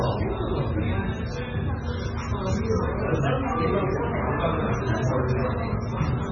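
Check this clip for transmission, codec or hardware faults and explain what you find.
One codec fault runs through the whole clip. Throughout, the audio sounds watery and swirly, with metallic chirping on bright, noisy parts, softened attacks, and nothing at all above 7 kHz. The damage is heavy. The likely cause is MP3 compression starved of bits, which fits a bitrate around 16 kbps. With so few bits, the encoder cuts the treble at a fixed point and drops weak frequency lines, which flicker on and off from frame to frame and produce the swirl.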